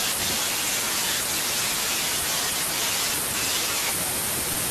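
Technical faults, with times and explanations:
0.8–1.4 s and 2.6–3.0 s, chunks out of order: 200 ms blocks play in the wrong sequence. In the first, a chunk lands two places late; in the second, one place late. The sound jumps. On the waveform, hard joins appear at the chunk edges, with vertical lines on the spectrogram where the harmonics break.
4.53 s, sound dropped by the voice detector: about 20 ms of the sound gives way to steady low noise, likely because Opus DTX treated it as background and comfort noise filled the gap. On the waveform the envelope dips to the room-noise floor, about 29 dB below the speech. The spectrogram shows a thin, flat band there.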